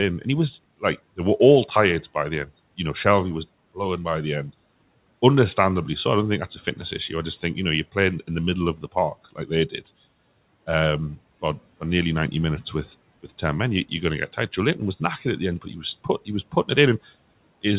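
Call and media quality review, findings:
Speech cut by the noise suppressor at 8.76–8.96 s after "playing in the middle", 9.25–9.51 s, and 15.62–15.84 s after "knackered at the end". Short dips of about 16, 16 and 11 dB. The suppressor took low-level speech for noise and ducked it, so the speech sounds swallowed. Band-limited at 4 kHz, consistent with a narrowband call codec.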